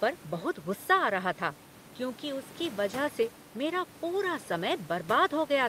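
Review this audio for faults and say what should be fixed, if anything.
No system faults turn up in this speech recording, so nothing needs fixing. A low room noise sits about 22 dB below the speech, and it belongs to the recording space rather than to any fault in the audio chain.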